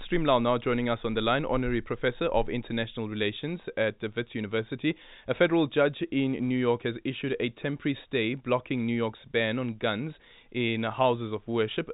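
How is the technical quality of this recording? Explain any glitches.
No faults turn up anywhere in the recording; it just carries the usual telephone-line character of G.711 coding, with nothing above about 3.8 kHz getting through, which fits an A-law line at 64 kbps.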